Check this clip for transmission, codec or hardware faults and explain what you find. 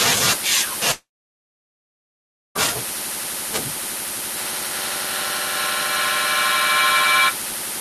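Two faults are audible: a long gap in the speech and a feedback echo later on.

From 0.91 to 2.57 s there is a long network dropout. The last sound is briefly stretched into a fading buzz, then about 1.5 s of silence follows. Speech resumes with roughly 1.6 s missing, most likely because packets stopped arriving and the receiver concealed the gap.

From 4.36 to 7.48 s there is a feedback echo between two devices. Each phrase returns roughly every 0.4 s, thinner and ringing, reaching about 0 dB relative to the speech. A second device's loudspeaker is re-captured by a nearby microphone that its echo canceller cannot suppress.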